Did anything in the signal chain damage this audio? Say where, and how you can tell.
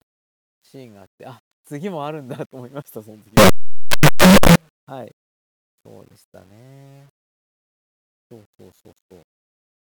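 Yes. From 3.37 to 4.56 s the speech turns into loud, harsh distortion. Quiet moments in that stretch are as loud as the rest, and every zero crossing sounds like a full-range jump. The stage is sample-format conversion. The likely cause is signed and unsigned mixed up, with the top bit flipped on each sample, which fits 8-bit samples.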